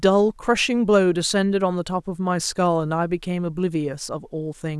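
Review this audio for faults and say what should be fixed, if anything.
Nothing needs to be fixed, because reviewing this speech audio turns up no faults.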